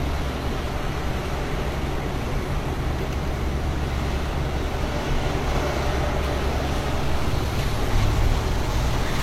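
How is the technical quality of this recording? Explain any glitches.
The recording has a persistent coding fault that runs from start to finish. It sounds like transcoding between lossy codecs. Nothing is present above 16.2 kHz. Two kinds of artefact sit together: smeared, swirly detail and a thin, synthetic sheen on the top end. The likely cause is an MP3 stage followed by a low-rate HE-AAC stage. The second encoder spends its bits on the first encoder's damage and then adds its own.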